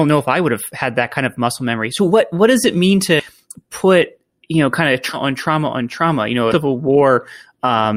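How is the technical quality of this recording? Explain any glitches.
The recording has compressed frames skipped in three places, so the speech jumps forward abruptly. After "what does it mean", around 3.19 to 3.26 s, and after "you know kind of" at 5.13 to 5.17 s, just before "on trauma on trauma", roughly a fifth of a second of speech vanishes. At 6.51 to 6.54 s the gap is a little shorter. Whole frames were left out of playback, and the jump length fits 20 ms frames. On a waveform the speech envelope changes shape abruptly at each join. On a spectrogram it shows as a vertical seam where the formant tracks cut off.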